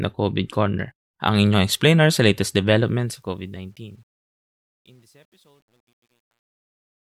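Just after "inyong explainer sa latest", at 2.86 s, truncation distortion on a fade sets in: the fade-out keeps too few bits, consistent with about 10-bit resolution, without dither. From 3.96 s to 7.15 s the speech turns gritty. The waveform shows staircase steps; a spectrogram shows broadband grainy noise.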